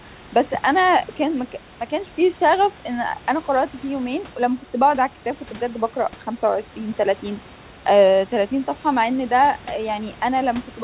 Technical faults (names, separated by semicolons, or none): none